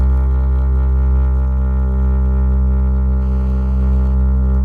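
From 3.22 s to 4.15 s the music picks up a GSM phone buzz: a hard, raspy tone at about 217 Hz, sitting around 32 dB below the music and nearly steady, as a phone on a call would be. The phone's bursting radio signal is rectified in the audio circuitry and demodulated into sound. On a spectrogram it shows as a comb of evenly spaced lines at 217 Hz and its many harmonics; the waveform carries a fine, regular pulse train riding underneath.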